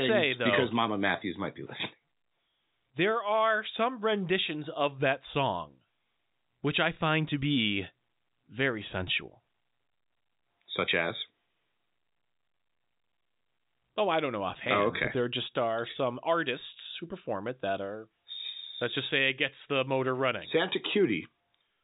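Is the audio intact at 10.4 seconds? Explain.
Yes, the audio is intact at 10.4 seconds, carried through G.711 telephone coding with its band limited to about 3.8 kHz.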